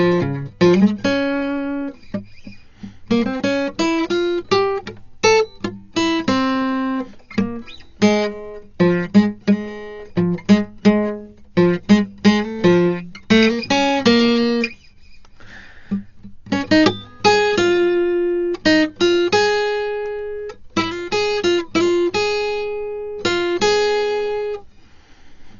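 A music clip with one fault running the whole way through. The sound is dull and boxed in, with nothing above 7 kHz. Tones carry a rough, fluttering noise around them, and the coding damage is heavy. This is likely Dolby Digital compression at a very low bitrate, which fits a 40 kbps stream. At that rate the encoder narrows the band. Many frequency lines get no detail bits, and the decoder fills them with noise.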